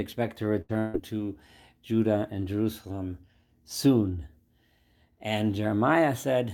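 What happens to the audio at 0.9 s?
Around 0.9 s there is a burst of packet loss, spanning 0.79 to 0.95 s. About 140 ms of the speech was lost, and the receiver covered the gap by extending the last sound it had, fading it over roughly 145 ms. The result is a held, decaying tone or hiss, then an abrupt jump ahead. On a spectrogram the last sound freezes into flat bands that dim. The waveform shows the repeated sound shrinking before normal speech returns.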